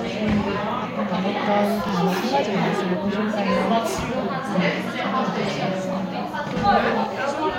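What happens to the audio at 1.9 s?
At that point the audio stream hits a join between overlapping chunks. The processing works in blocks of about 2.0 s, and the block starting here begins before the previous one finished, so roughly 23 ms of material at the boundary is played twice, from 1.89 to 1.91 s. The duplicated sliver sits right against the seam, which you hear as a brief click or small stutter where the sound momentarily repeats itself.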